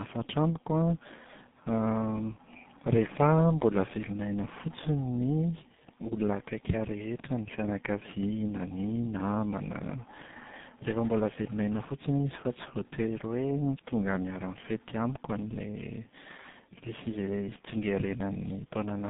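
Throughout the speech there is tandem speech coding. The sound carries the damage of two low-rate speech codecs in a row, which fits a GSM full-rate leg handed over a G.711 link into G.723.1 at around 6.3 kbit/s. Each coder re-encodes the previous one's output, so their errors stack. Nothing survives above 3.8 kHz, and the result is muffled, rough and warbly, worse than either codec alone would leave it.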